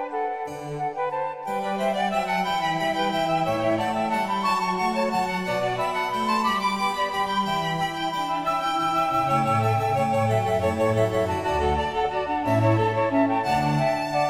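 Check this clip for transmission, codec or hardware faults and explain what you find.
No transmission, codec or hardware faults can be heard anywhere in this clip. Nothing in the audio points to a problem along its path.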